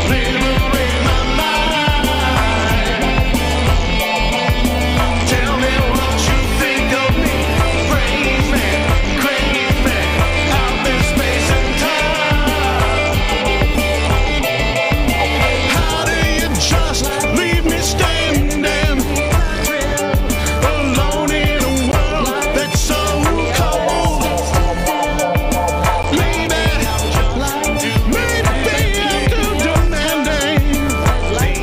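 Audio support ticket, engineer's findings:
Block of digital silence, 21.92 s and 26.03 s: 15 ms zeroed gaps, each heard as a tick. Output buffer probably not filled in time, hard cut at both edges.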